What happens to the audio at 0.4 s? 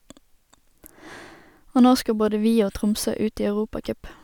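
Nothing goes wrong at 0.4 s; the speech there plays through intact, with no dropout, click, distortion or other fault.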